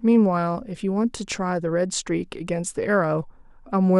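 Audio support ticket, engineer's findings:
Listened through the speech recording and nothing stood out as a fault worth flagging.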